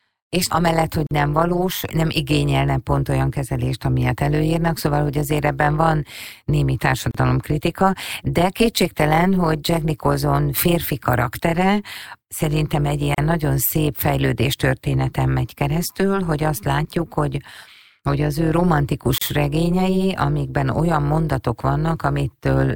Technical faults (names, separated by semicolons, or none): overlap-add ripple; gap at a join of encoded pieces